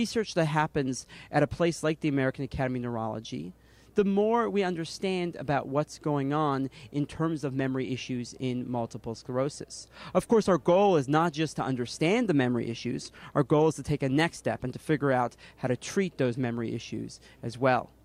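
A soft, steady rattle of clock slip clicks runs from 0.11 to 18.03 s, roughly every 40 ms, likely from two unsynced clocks drifting around 500 ppm apart.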